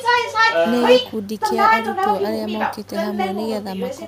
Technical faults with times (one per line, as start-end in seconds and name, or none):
none